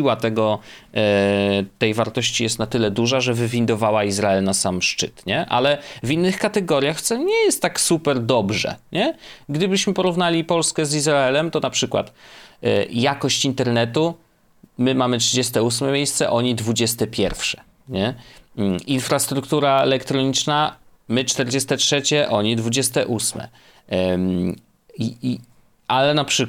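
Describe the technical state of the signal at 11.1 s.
A soft rattle of tiny ticks, roughly fifty per second, runs from 0.10 s to the end: clock slip clicks, likely single samples slipping between unsynchronised clocks.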